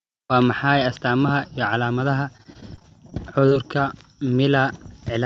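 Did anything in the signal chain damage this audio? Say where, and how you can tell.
Yes. Repeated packet loss on the network leg between 2.37 and 3.54 s left about a dozen short holes, none longer than 22 ms, that were concealed by extending the preceding sound. That patching makes this stretch of speech choppy and robotic, with fragments missing.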